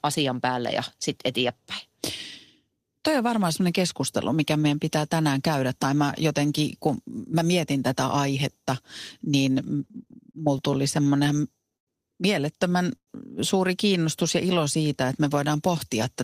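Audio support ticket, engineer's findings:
Repeated stalls (stutter), 9.85–11.9 s: 16 jitter buffer underruns with concealment, longest 103 ms, 277 ms filled in total, nothing lost. The spectrogram shows repeated smeared, flat-topped bands.

Call audio freeze, 12.96–13.1 s: a 115 ms hold that decays into about 70 ms of silence, then the audio resumes intact. Likely cause: held-up packets emptied the jitter buffer. The waveform shows a fading plateau, then a flatline.

Jitter buffer slow-down, 14.23–15.08 s: playout at 93% speed while the buffer rebuilds reserve, adding 70 ms. The pitch is unchanged, with drawn-out sounds. The waveform shows identical pitch cycles repeated back to back.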